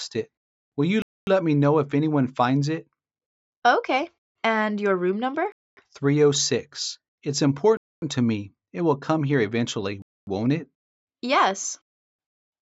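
Gaps between chunks of 0.25 s cut in at 1.02, 3.27, 5.52, 7.77, 10.02 and 12.27 s, one after every 2 s of sound. They sound like short holes. The waveform drops to silence, and the spectrogram shows blank vertical bands.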